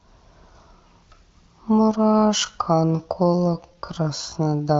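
Time-stretched section, 1.73 s to the end: speech suddenly slows to 0.67 speed with pitch unchanged and drags, likely stretched to fill a set length.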